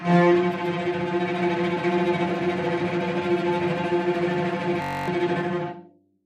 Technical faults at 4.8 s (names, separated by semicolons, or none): system hang loop